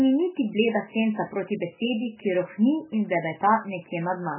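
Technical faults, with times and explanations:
Throughout, likely heavy MP3 compression at a low bitrate around 8 kbps: the speech stops dead above 3 kHz and sounds dull and watery as weak frequency lines flicker between frames. A spectrogram shows a flat 3 kHz ceiling over blotchy, patchy energy.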